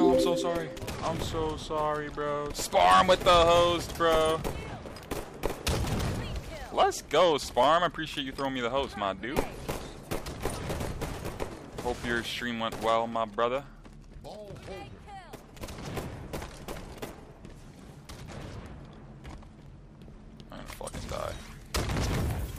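At 1.62, 4.63, 7.63, 10.64, 13.65 and 19.66 s you get a small click or hiccup. That's overlapping chunks: the audio was handled in blocks about 3.0 s long, and each new block starts a touch before the previous one finished, so roughly 7.07 ms gets played twice at every join. That tiny repeat is what you hear as the tick, and the steady 3-second spacing gives it away.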